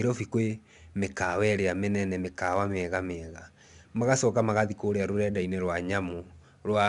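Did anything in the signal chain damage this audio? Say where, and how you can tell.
Yes, at the codec stage: the speech was coded as 4-bit ADPCM, each sample stored as a coarse step from a prediction. Throughout, a gritty hiss rises and falls with the speech's loudness, and nothing sounds above 10.7 kHz, which fits roughly 89 kbps.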